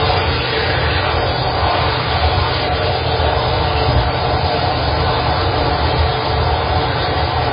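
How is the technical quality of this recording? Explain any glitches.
Poor, because of one heavy fault. Throughout, nothing is audible above 5 kHz, and the sound swirls watery. This is likely heavy MP3 compression at about 16 kbps, dropping treble and weak frequency lines.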